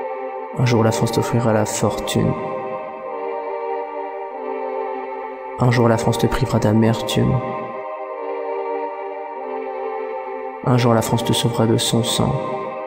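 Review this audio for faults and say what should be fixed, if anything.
Nothing needs fixing; no faults can be heard here.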